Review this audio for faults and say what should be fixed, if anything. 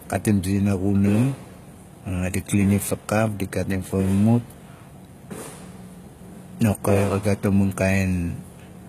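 Throughout the speech, the top end sounds synthetic. S sounds come out gritty and lispy, with a metallic sheen, and nothing is present above about 14.9 kHz. This is plainly audible HE-AAC compression damage, likely from HE-AAC v2 at a low rate that fits roughly 20 kbps. Only the lower spectrum is truly coded; the treble is rebuilt by copying lower bands upward under a coarse envelope, so its harmonics don't align with the real ones. To prevent it, encode from the original source with plain AAC or Opus at a substantially higher bitrate.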